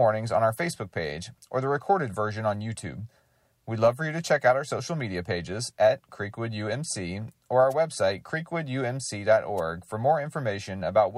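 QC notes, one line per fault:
7.70–7.74 s and 9.57–9.61 s, wireless microphone noise hit: two brief swishes of static, the first right after "or our", each about 40 ms long. The analogue FM radio link fades as reflected signals cancel, letting receiver noise surge over the speech.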